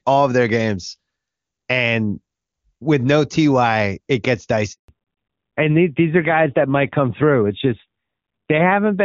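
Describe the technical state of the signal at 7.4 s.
At 7.4 s the call is in a fallback to narrowband that began at about 4.88 s and runs to the end: the link has dropped from HD Voice to a narrowband codec, which sounds like AMR-NB at around 7.4 kbit/s. Nothing above 4 kHz survives, so the speech turns duller and rougher.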